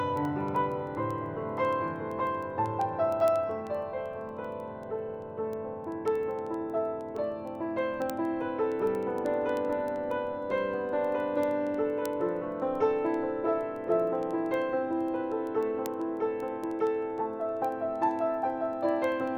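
Word clock ticks run through the audio from 0.17 s to 19.35 s: sharp clicks of uneven strength at a steady rate of roughly one every 70 ms. This points to an unlocked digital receiver whose clock differs by around 300 ppm, slipping one sample each time. The even spacing sets it apart from random crackle or dropouts.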